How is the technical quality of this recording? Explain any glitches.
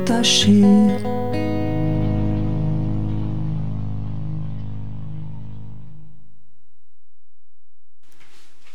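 The recording carries a DC offset for its entire length. The whole waveform sits shifted away from zero by a constant amount, at about -26 dBFS. That offset is not audible as a tone or noise. It shows up as a steady component at 0 Hz, at the very bottom of the spectrum, and it eats into the available headroom, so peaks on one side of the waveform have less room than they should.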